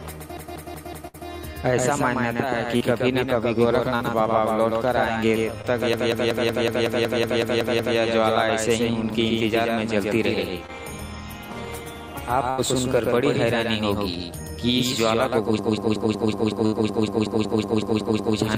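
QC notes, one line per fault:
throughout: doubled audio track. A second full-band copy of the whole sound trails the original by roughly 150 ms, only about 5 dB quieter. Being dry, it adds no room or decay, so everything has a flat, slapback double outline. Most likely the same signal is reaching the mix twice, with a slower capture path or an edit holding a copy out of step.
0.37–1.29 s, 5.93–7.98 s, 15.59–18.38 s: system hang loop. Each time, one 185.76 ms slice of audio repeats exactly, 5, 11 and 15 times, at 5.38 Hz, giving a rhythmic machine-gun stutter rather than a buzz. The computer or driver stalled while the sound hardware kept cycling the same ring buffer, and the loop length fits an 8192-sample buffer.
1.07–1.16 s, 12.50–12.60 s, 16.66–16.74 s: burst of packet loss. Runs of about 60, 80 and 60 ms never arrived in time. The receiver extended the last sound while fading it, so it becomes a dimming held buzz or hiss, and playback then jumps ahead with the in-between audio gone. 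The first and third fall inside the stutter sections above.
2.77–2.82 s, 3.96–4.02 s, 5.62–5.73 s, 10.66–10.70 s: short concealed packet loss. Gaps of about 40, 40, 20 and 20 ms were filled by continuing the previous sound, pitched if voiced or as shaped noise if not, then blended back. Each is a brief smear or wobble, and a short transient inside the gap can disappear.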